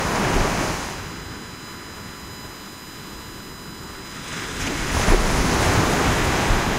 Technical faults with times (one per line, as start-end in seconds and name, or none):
0.00-6.79 USB whine